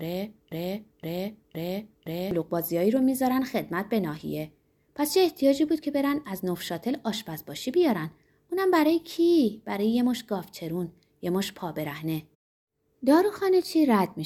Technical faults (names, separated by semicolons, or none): broken-record loop